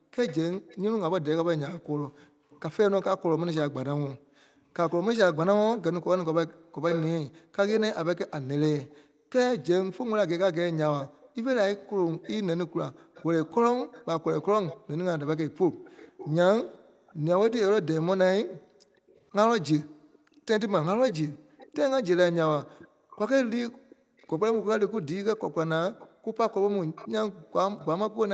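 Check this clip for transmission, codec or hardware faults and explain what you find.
Two faults show up across the speech, both tied to echo cancellation on a speakerphone-style call.

Background gated by the echo canceller, 0.00 to 28.19 s: the canceller clamps the mic while the far end plays, so room tone dips by up to about 40 dB, around five seconds in total.

Echo leak, 0.25 to 27.86 s: a faint delayed copy of the speech trails by 487 ms, about 15 dB down, likely residual loudspeaker pickup the canceller didn't fully remove.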